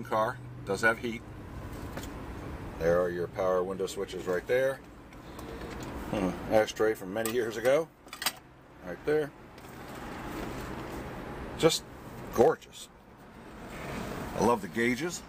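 No technical faults can be heard anywhere in the recording. Nothing interrupts or alters the sound at any point.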